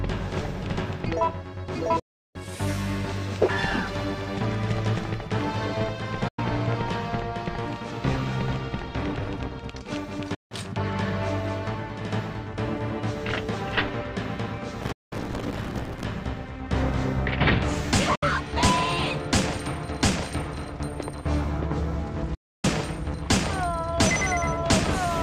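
Six digital broadcast dropouts break the audio, at 1.99 s (352 ms), 6.28 s (96 ms), 10.34 s (160 ms), 14.92 s (192 ms), 18.15 s (64 ms) and 22.34 s (288 ms). Each time the receiver stopped getting usable frames and muted, so the sound fades out over about 8 ms, leaves a dead hole, then resumes with that stretch lost. The gap lengths all fit whole frames of about 32 ms. A waveform shows flat silent gaps, and a spectrogram shows clean full-band blank columns.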